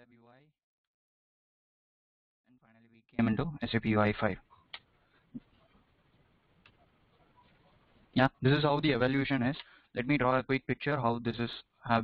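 From the very start until 3.19 s, the audio is in an audio dropout to a faint residue. The dropout is already under way when the clip begins. Only a faint leak of the sound remains, roughly 30 dB below its normal level. At 3.19 s the full signal returns abruptly, not as a fade. The likely cause is a break in the wanted signal while the path after the break stayed live.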